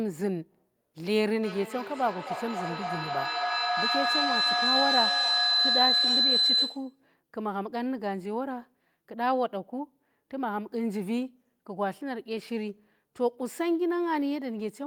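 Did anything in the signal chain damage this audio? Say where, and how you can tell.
Yes. From 1.43 s to 6.98 s there's a feedback howl, and it's a call-processing problem. Two devices in the same room are feeding each other: the mic picks up the speaker, and each pass round the loop comes back louder. You can hear it narrowing onto a tone around 4 kHz and pulsing roughly every 300 ms, which is the loop's delay. It peaks at about 4 dB above the speech before the loop breaks.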